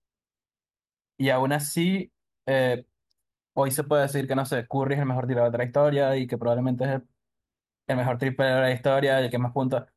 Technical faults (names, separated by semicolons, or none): none